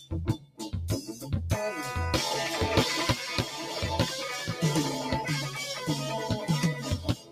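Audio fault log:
throughout, noise suppressor applied to music or sounds: a speech-tuned suppressor keeps treating sustained tones and ambience as noise, so level swings by around 10 dB. Attacks mostly get through while held parts and tails sink, giving a pumping, thinned sound rather than clean gating.
0.37–0.62 s, 1.06–1.29 s, 6.74–7.32 s, sound cut by the noise suppressor: brief stretches where sustained sound is pushed down by about 13, 7 and 12 dB. The sound is turned down rather than cut to silence, so these differ from a dropout.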